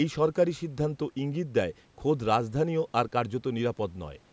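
No technical faults can be heard anywhere in the speech. The call microphone processing trims away the lowest bass and leaves nothing above 8 kHz, which is how that path normally sounds.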